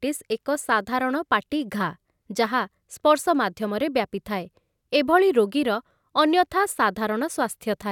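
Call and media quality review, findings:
No audible faults found.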